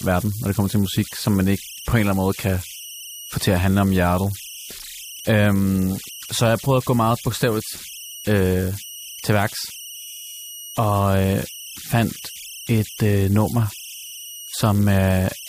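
Speech here, with converter idle tones running the whole way through: tones around 3 kHz, about 17 dB below the signal, from an undithered delta-sigma converter cycling on low-level input.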